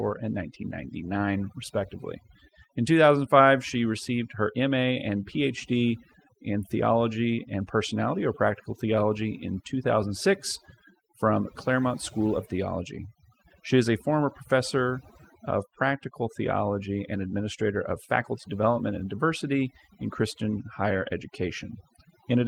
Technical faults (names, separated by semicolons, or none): overdone noise removal